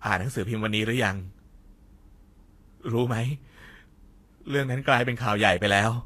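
Speech, and it carries a hissy, grainy coating from start to finish, with nothing at all above 14.2 kHz. That's most likely Vorbis compression pushed hard, which fits a bitrate of around 34 kbps. At that setting the encoder chops off the top end and quantises the remaining treble so roughly that fine detail turns into noise of similar energy. You hear it as roughened tone and smeared consonant attacks throughout.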